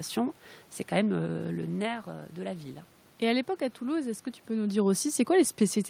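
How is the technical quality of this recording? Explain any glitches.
No technical faults detected.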